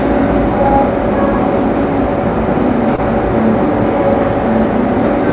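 Short concealed packet loss at 2.96 to 3.00 s: roughly 20 ms of audio failed to reach the decoder in time, and the receiver patched about 17 ms of that gap by extending the preceding sound, either as a continued pitch or as shaped noise, before crossfading back into the real signal. The result is a brief smear or wobble, heard against the narrowband call path's lack of anything above 4 kHz, which fits G.711 mu-law.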